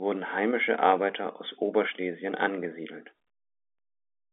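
Nothing in this speech recording counts as a technical fault. What can be heard is an ordinary fixed-line telephone path, most likely G.711 A-law coding, with the sound held to a line band of roughly 250 Hz to 3.6 kHz and nothing above about 3.8 kHz.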